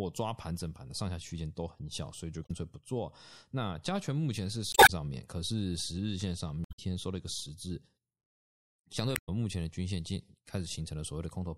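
From the start the speech sounds watery and swirly, with dulled treble and smeared consonant attacks. That is likely MP3 compression at a low rate, which fits about 64 kbps: the encoder trims the top end and lets weak frequency lines flicker between frames.

At 2.42 to 2.51 s, 4.71 to 4.90 s, 6.63 to 6.79 s and 9.13 to 9.29 s, brief squawks and blips break through. This is damaged data in a compressed stream: the decoder misreads corrupted frames, loses sync and jumps to the next header.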